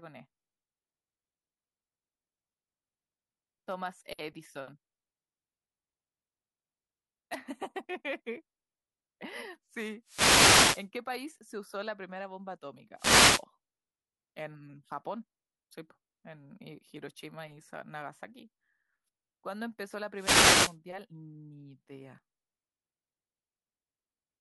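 Three wireless microphone noise hits break into the speech. They fall at 10.04 to 10.89 s, 12.96 to 13.45 s and 20.15 to 20.77 s. Each time the radio link fades. Receiver noise swells up over the voice. It sounds like a brief swish of static.

At 22.18 s there is a skip. About 50 ms of audio is lost and the two sides butt together. This is likely audio missing between chunks, consistent with processing in 4-second blocks that drops a sliver at the join.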